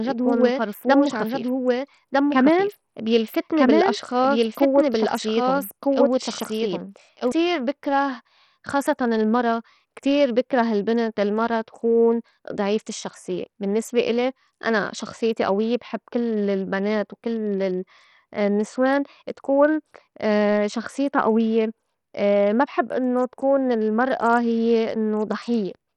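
From the first second to the end, the speech carries heavy damage of the kind Bluetooth SBC compression leaves, most likely from a low-bitrate SBC link. The coding points to something around 64 kbps. At that rate the upper sub-bands get few or no bits. Nothing is left above 17.2 kHz, and the treble below that flickers in and out rather than holding steady. The remaining bands are coarsely quantised, so a gritty, grainy noise and some aliasing ride on the voice throughout.

A doubled audio track is already under way when the clip opens and runs to 7.32 s. It is likely the same signal arriving twice, once through a slower path. A full-band second copy of the speech trails the original by about a second and a half, at roughly the same level. It has no decay or room colouring, so it sounds like a second identical voice talking over the first. It cuts off abruptly at 7.32 s, between "يكون فرفوس" and "بكره خاصّتاً المرا كتير".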